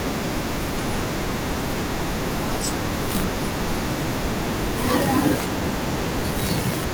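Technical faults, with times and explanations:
5.41–6.81 s: periodic USB or driver dropouts. Across this stretch of the speech, a steady train of about fifteen ticks recurs every 0.1 s, ten per second. Each marks a gap of roughly 2 ms where the signal is replaced by silence, as something repeatedly stalls the audio path and the samples go missing. The strict clock-like spacing, rather than scattered timing, sets this apart from random dropouts or isolated clicks.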